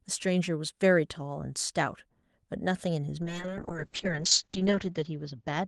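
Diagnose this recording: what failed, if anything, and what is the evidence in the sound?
Call bitrate drop at the network and codec stage, 3.22 s to the end: the bandwidth estimate fell and Opus was starved of bits, fitting a drop from 32 to 6 kbps. Speech turns coarse and watery, highs narrow from 12 kHz to 8 kHz, worst for about 1 s.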